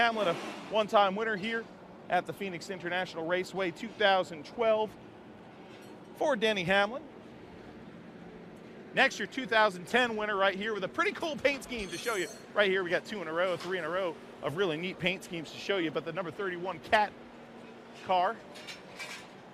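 No technical faults are audible.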